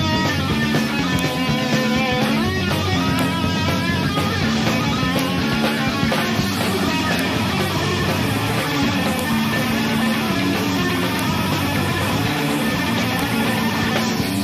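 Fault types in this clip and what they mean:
File header played as audio: a sharp, loud click at 1.19, 3.19, 5.19, 7.19, 9.19, 11.19 and 13.19 s, every 2.0 s regardless of the sound. Each piece's WAV header bytes were left in when the pieces were joined, so they play back as samples.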